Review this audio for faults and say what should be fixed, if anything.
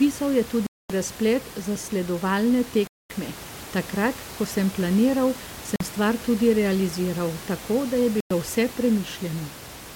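Four gaps of pure silence, at 0.67–0.90, 2.87–3.10, 5.76–5.81 and 8.20–8.31 s, are likely Bluetooth stalls: the headphone buffer emptied while delayed packets were resent. Unlike codec dropouts, there's no warble or smeared sound, just a clean cut. Keeping the phone near the headphones and away from 2.4 GHz interference would prevent this.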